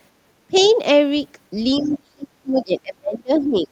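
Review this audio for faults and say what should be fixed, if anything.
The speech drops sharply from 0.47 to 0.54 s, by roughly 25 dB, then again from 1.78 s to the end of the clip, sinking as far as about 35 dB. This is speech suppressed in double talk, likely from an echo canceller that heard both sides at once and turned everything down. Unlike a network dropout, it tracks overlapping activity rather than packet timing.

The other side's voice leaks through from 0.57 to 0.71 s and again from 1.83 to 1.92 s, faint, roughly 25 to 30 dB below the talker. It is likely loudspeaker sound the echo canceller failed to remove. What separates it from room reverberation is that it is a second, distinct voice, not a smeared tail of the talker's own sound.

Prevention: use a headset, or tune the echo canceller's double-talk detection so it keeps near-end speech during overlap while still cancelling loudspeaker echo.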